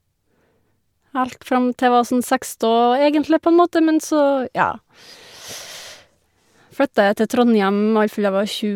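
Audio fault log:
Nothing to log here; this speech clip comes across without any trouble worth noting.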